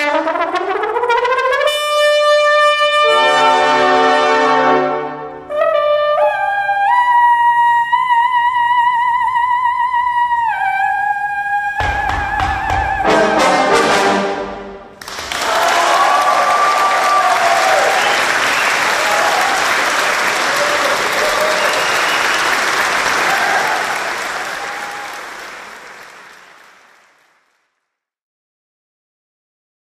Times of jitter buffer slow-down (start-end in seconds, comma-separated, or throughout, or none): none